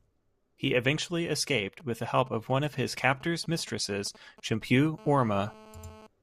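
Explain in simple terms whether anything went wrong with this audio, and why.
Two problems come from a nearby 2G mobile phone. From 1.80 to 4.87 s, right after "eventually escaped", GSM signalling bursts are heard: a galloping dit-dit-dit of brief 217 Hz buzzes. The phone's short radio bursts are picked up and turned into sound by the audio circuit. Unlike a steady hum, it comes in clumps.

From 4.98 to 6.07 s the pattern changes to a GSM phone buzz, a continuous, hard, raspy buzz at 217 Hz. The phone is now in a call, sending bursts 217 times a second without pause, so the buzz stays nearly steady instead of galloping.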